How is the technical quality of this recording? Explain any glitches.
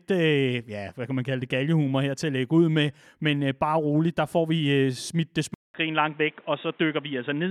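The recording has one clear glitch. From 5.54 s, right after "smidt det", the speech likely moves to a poorer input device. After a 200 ms gap, it is dull above 3.8 kHz, at the same level but with a faint new background noise. That gap and the new noise set it apart from a simple filtering change.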